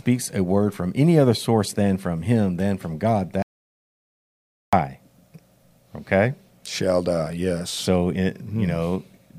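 A speech recording that goes abruptly dead at 3.42 s and stays in total silence until 4.73 s, a gap of about 1.3 s with no room tone or hiss, before the talker returns mid-flow. That is an audio dropout to silence: the input feed was interrupted, most likely by a momentary disconnection or unintended mute, while the recorder kept writing silence, so whatever was spoken in that stretch is lost.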